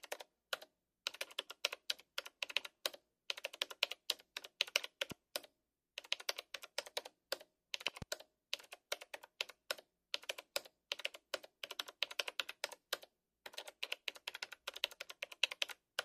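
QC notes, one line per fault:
5.12–5.14 s and 7.88–8.04 s, loud pop: a sharp single pop about 10 dB above the sound, then a pair about 15 dB above it, with the sound continuing underneath. Likely a voltage spike from a switch, plug or static, briefly shaped by later circuits.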